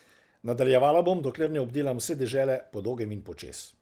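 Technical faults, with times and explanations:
1.41 to 1.47 s and 2.91 to 2.93 s, lost packet rebuilt from error correction: in both spots the speech keeps going with no gap, but it briefly turns rougher and noisier. Packets went missing, and the next packet in each case carried a low-bitrate backup copy, which the decoder played instead. The first patch lasts about 40 ms, which fits two lost packets. The second lasts about 20 ms, which fits a single one.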